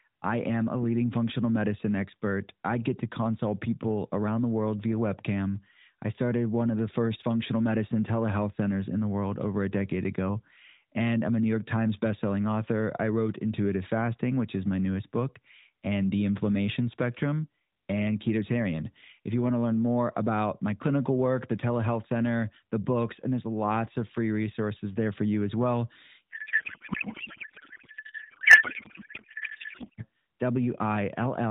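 A codec payload misread runs from 26.31 to 30.06 s. The AMR frames were packed octet-aligned but unpacked as bandwidth-efficient, so every field lands in the wrong bits and the speech collapses into garbled noise and warble. The narrowband codec's band limit stays audible throughout, with that mode's light coding damage.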